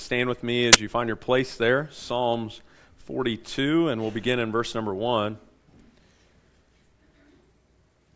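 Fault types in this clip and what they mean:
File tags played as audio: at 0.73 s an embedded cover picture, stored as compressed data, is decoded as if it were samples, giving a brief burst of very loud white noise with hard edges, lasting about 17 ms before the sound resumes.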